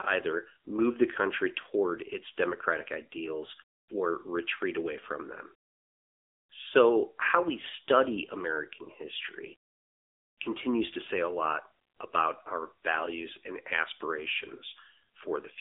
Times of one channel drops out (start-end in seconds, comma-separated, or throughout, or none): none